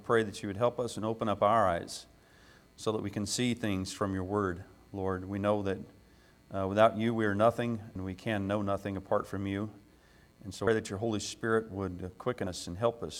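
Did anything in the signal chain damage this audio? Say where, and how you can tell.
Yes. The damage sits at the codec stage, where compressed frames were skipped during decoding. At 7.95 s, 10.67 s and 12.46 s the audio jumps forward, dropping roughly 150 ms, 200 ms and 70 ms of material. Each gap spans roughly 4, 7 and 2 frames of 32 ms, pointing to a handful of frames either missing from the file or rejected as corrupt.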